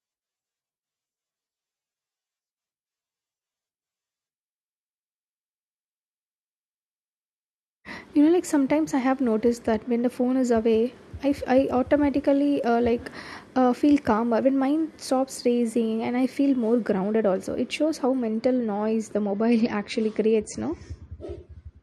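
At 19.24 s the speech suddenly thins out and stays that way to the end. That's the adaptive stream switching to a lower bitrate, likely because the connection slowed. With no gap, the treble vanishes above 10.1 kHz and artefacts thicken, which fits roughly a 40 kbit/s MP3 rendition.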